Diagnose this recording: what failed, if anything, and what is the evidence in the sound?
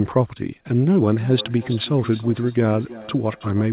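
Feedback echo between two devices, at the call-processing stage: from 1.18 s to the end the sound returns at a steady interval of roughly a third of a second, about 17 dB below the speech and thinner each time. A second nearby device on the call replays the audio into this microphone, where the local echo canceller cannot remove it. The fixed, recurring delay rules out ordinary room reverberation, which smears continuously rather than repeating.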